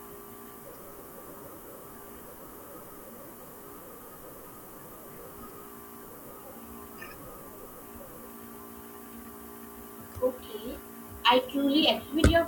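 Low bit depth with noise shaping runs throughout: coarse rounding, consistent with 8-bit audio, is pushed upward, leaving a thin, treble-heavy hiss only about 10 dB below the speech.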